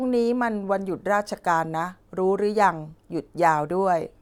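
No technical faults are audible anywhere in the speech.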